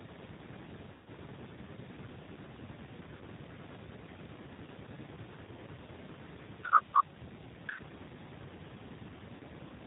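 A speech recording carried over a G.729 codec link. The narrow, slightly rough and synthetic tone fits the 8 kbit/s rate of G.729A. Nothing above 4 kHz comes through, so sibilants sound dull. The voice is rebuilt from a vocal tract filter and a pitch predictor, with only a few pulses for each 10 ms frame. That sparse model is what gives the plainly audible rough, synthetic quality. VoIP packet loss concealed by the speech codec occurs three times. The longest is from 0.92 to 1.08 s, where about 140 ms of audio went missing. Shorter losses of about 40 ms fall at 3.17 to 3.23 s and at 9.36 to 9.42 s. In each gap the decoder keeps repeating its last pitch and filter at falling gain. This smears the voice into a fading buzzy tone or coloured noise. Each frame depends on the one before, so the sound stays weak briefly after the packets resume.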